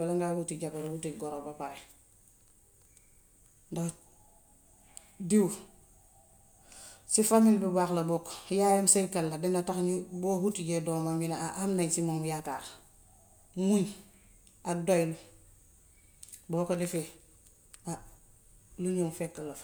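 Listening to the speech in this recording, nothing stood out as a technical problem at any point.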